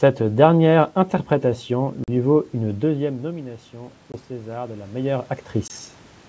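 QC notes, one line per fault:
2.04, 4.12 and 5.68 s packet loss on an ADPCM call: hard-edged silent holes of about 40, 20 and 20 ms, fitting one or two lost packets. Each shows as a blank vertical stripe in the spectrogram. The decoder's predictor and step size then resync, so the speech returns slightly distorted before settling.
2.57–5.34 s automatic gain rising: after the input fell by about 15 dB as the talker moved back, gain climbs by about 6 dB. The waveform envelope and room noise floor swell together slowly.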